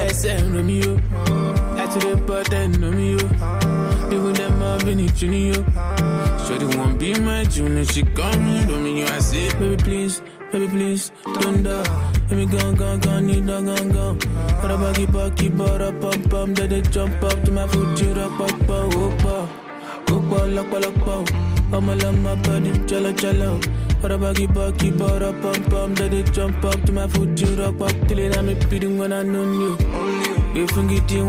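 No technical faults can be heard anywhere in the clip. Nothing in the audio points to a problem in how it was captured, processed or delivered.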